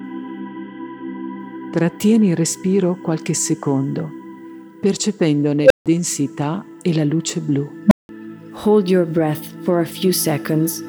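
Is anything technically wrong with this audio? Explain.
Yes, there's an unstable filter fault, and it hits twice. A recursive filter got bad coefficients, so its feedback kept growing. At 5.63 s a tone around 500 Hz swells over about 74 ms, clips, then overflows and cuts to silence for 155 ms. At 7.87 s a lower tone, roughly 200 Hz, builds faster, in about 46 ms, before going quiet for 180 ms. Each one is a fast-rising squeal that ends in a gap.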